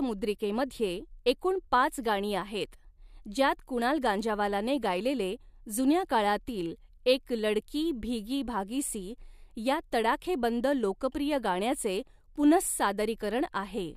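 No technical faults are audible in this speech recording.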